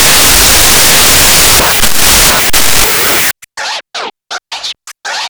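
An everyday-sounds recording with a wrong sample width fault from the start to about 3.31 s. It sounds like 16-bit data being read as unsigned 8-bit, so each byte is treated as its own sample. Low bytes turn into loud, hissy garbage, and only the high bytes carry a distorted trace of the real sound. Doubling the sample count also halves the speed and drops the pitch an octave.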